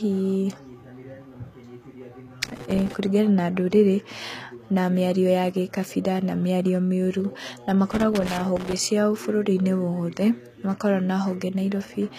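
A speech recording, with plainly audible codec damage throughout. The treble sounds rebuilt rather than captured: s sounds turn gritty and lispy, and nothing reaches above 14.9 kHz. The likely cause is HE-AAC compression at a low rate, which fits roughly 20 kbps. Two bursts of loose connector crackle interrupt it, from 2.43 to 2.94 s, just before "kũringana na ndũrĩrĩ", and from 7.92 to 8.73 s. Each is an irregular scratching. A worn contact is making and breaking, chopping the signal.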